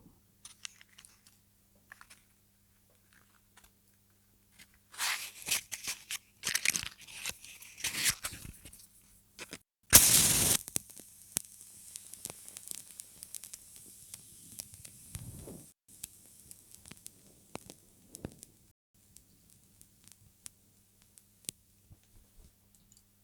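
At 9.55 s and again at 15.70 s, an intermittent contact drops the sound for about 0.22 s and 0.16 s, with crackle at each edge and faint hiss while open. At 18.71 s a rebuffering stall inserts about 0.23 s of silence, then playback resumes exactly where it stopped.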